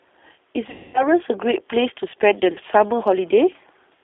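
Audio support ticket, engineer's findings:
G.729 codec, whole clip: speech coded by a low-rate CELP coder, consistent with G.729A at 8 kbit/s. Band limited to roughly 300 Hz to 3.6 kHz. Plainly audible damage: thin, slightly rough, synthetic timbre from pulse-based excitation and filter modelling.

Effect: no low end and no air above 3.6 kHz. Sibilants are dulled and vowels have a rough, synthetic edge for the full length.

VoIP packet loss concealed by the speech codec, 0.70 to 1.06 s: a burst of consecutive lost packets, about 240 ms of audio missing. The decoder extrapolated its last pitch and filter with decaying gain, so speech smears into a fading concealment sound and stays weak after packets resume.

Same fault, 2.53 to 2.59 s: a short loss of about 30 ms, probably a single packet. Brief concealed smear and a momentary dip, with distortion as the decoder state recovers.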